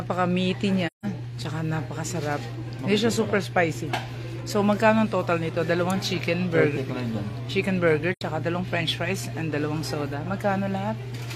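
AAC frame loss with muting occurs twice, from 0.86 to 1.06 s and from 8.12 to 8.22 s. Each time the sound fades into a brief silent gap and fades back, with soft edges rather than a hard cut. The decoder received no data for that stretch and output zeroed spectra, so the overlapping transform windows taper the audio down and up. The gaps, about 171 ms and 85 ms of missing audio, fit roughly four and two lost frames respectively.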